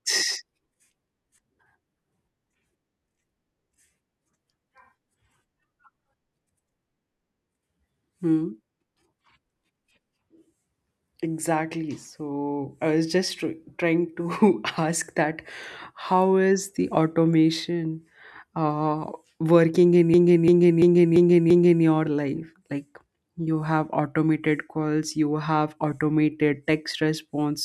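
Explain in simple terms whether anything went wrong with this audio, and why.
From 20.14 to 21.85 s, a 0.34 s piece of the speech repeats five times, a stutter of about three per second. This is a system hang loop: the computer froze while the sound hardware kept replaying one buffer, which fits a 16384-sample buffer.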